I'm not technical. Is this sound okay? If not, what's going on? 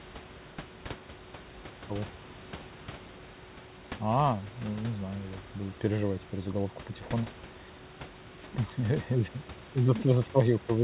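Yes, nothing has gone wrong with this recording. There is a quiet background noise from the room well below the speech, and because it came through a phone-style call connection, nothing above about 4 kHz gets through, so it has the slightly narrow sound of a normal phone call.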